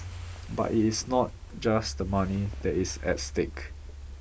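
Speech recording with no audible technical faults anywhere.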